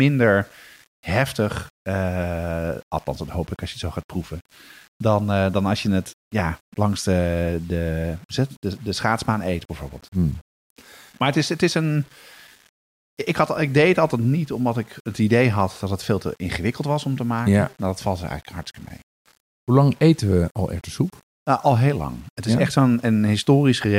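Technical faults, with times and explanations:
Throughout, low bit depth without dither: a grainy, rough distortion rides on the speech and changes with it, sitting roughly 35 dB below the signal, with quiet tails turning gritty or sputtering into silence. The likely cause is samples rounded to an 8-bit scale with no dither, so the error tracks the signal rather than forming steady hiss. On a waveform, quiet stretches show visible staircase steps. A spectrogram shows broadband haze that appears and vanishes with the speech.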